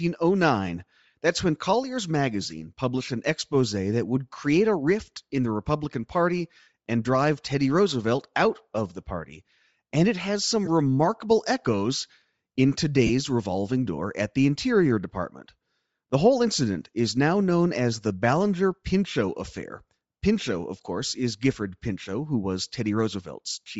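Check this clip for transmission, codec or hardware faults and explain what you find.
Two faults are audible in this speech: codec damage across the whole clip and three brief dropouts of lost LE Audio frames.

Throughout, speech has a grainy, breathy edge, likely from Bluetooth LC3 compression at a low bitrate near 32 kbps; a spectrogram shows upper bands patchily noise-filled.

Lost LE Audio frames occur at 6.61–6.67 s before "and drive", 10.66–10.68 s after "it has", and 13.06–13.10 s after "remarkable echoes in". Concealment repeated the last spectrum with scrambled phases, producing short noisy smears that appear as smudged, blurred patches in the spectrogram.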